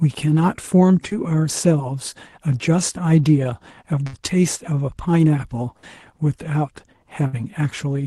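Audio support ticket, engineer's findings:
Short held buzz/hiss dropouts at 4.07–4.15 s, 5.77–5.85 s and 7.27–7.35 s, each about 60 ms of fading fill, then audio resumes with roughly 60 ms skipped. Burst of packet loss on the Opus call path, which sounds band-limited to about 12 kHz. Jitter buffer concealment extends the last frame and decays it. Consecutive packets lost or arriving late. Check network loss and jitter buffer depth.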